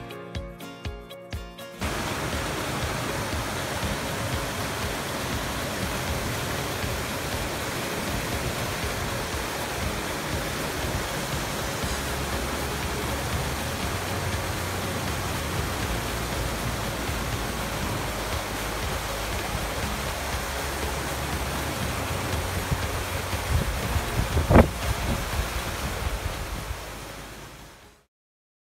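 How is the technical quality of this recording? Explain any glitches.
The recording has four glitches where chunks play out of order: from 6.0 to 6.75 s, 7.75 to 8.25 s, 14.75 to 15.75 s and 16.75 to 17.5 s. In each, a 250 ms block arrived late and played one to three blocks after its proper place. Nothing is missing, but the sound jumps back and forth, with three hard joins. A waveform shows abrupt discontinuities at 250 ms boundaries, and a spectrogram shows vertical broadband lines with mismatched content on either side.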